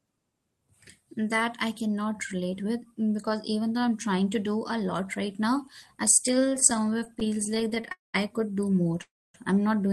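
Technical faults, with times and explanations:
6.35 to 7.90 s, repeated stalls (stutter): after "lot right now I", the speech catches and drags through 30 brief holds, none longer than about 15 ms, together about 295 ms, roughly a fifth of that stretch. Packets were reaching the receiver more slowly than they were being played, so the jitter buffer kept running dry, and each time the last sound was stretched to cover the wait. Nothing is lost, but the flow stumbles and slows.
7.92 to 8.16 s and 9.02 to 9.36 s, call audio freeze: the first pause falls just before "I could do more" and runs about 221 ms, the second follows that phrase and runs about 323 ms. In each, the last sound carries on briefly and then drops to silence, about 170 ms and 260 ms of it. This likely comes from packets held up in transit emptying the jitter buffer. When they arrive, the speech resumes where it stopped, so each pause adds delay while nothing is missing.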